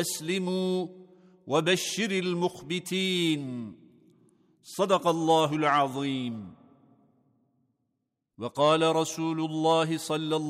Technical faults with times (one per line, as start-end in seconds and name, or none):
none